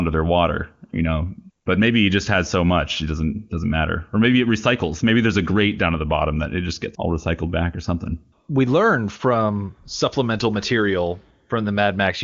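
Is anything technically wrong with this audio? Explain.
No, nothing's wrong here: it's speech carried over the AMR wideband (HD Voice) codec at 23.85 kbit/s, so it tops out around 7.1 kHz as that path normally does, and any coding traces are faint at most.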